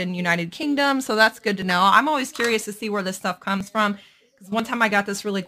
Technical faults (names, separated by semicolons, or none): overlap between stream segments